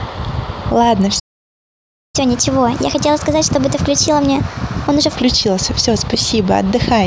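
At 1.19 s the speech cuts off mid-flow and the output stays silent until 2.16 s, a gap of just under a second. This is a playback stall, most likely the player running short of buffered data or its audio thread being held up, so nothing reached the output. On a waveform it shows as a flat line with an abrupt edge at each end, and on a spectrogram as a blank vertical band across all frequencies.

From 2.16 s to 5.16 s the speech resumes as a catch-up at higher speed: the player works through its backlog at 1.25 times normal rate by resampling, so the talking sounds hurried and pitched up by around four semitones, giving a chipmunk-like colour. At 5.16 s speed and pitch drop back to normal. On a spectrogram the harmonics and formants across those three seconds sit visibly higher and closer in time, then step down at the return to normal speed.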